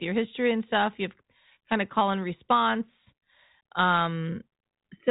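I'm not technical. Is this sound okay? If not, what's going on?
Yes, this sound is okay, and nothing is going wrong in it.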